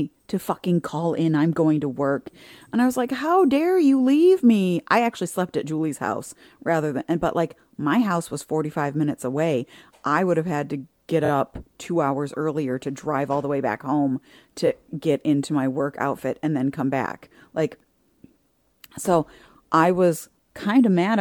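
Repeated frames: the stream delivered a single 23.2 ms compressed frame again, so the decoder replayed it. From 11.25 to 11.29 s, after "have had to get", it stutters twice, adding 46.4 ms. From 14.66 to 14.68 s, after "the way back home", one repeat adds 23.2 ms.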